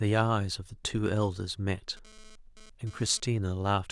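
From 1.97 s to 3.20 s a hard, raspy buzz sits under the speech, about 25 dB below it, pulsing at 216.7 Hz with a dense stack of harmonics and no relation to what is being said. This is GSM phone buzz: a nearby 2G phone sending data transmits in bursts 217 times a second, and the audio circuitry rectifies those radio pulses, so the buzz appears only while the transfer runs.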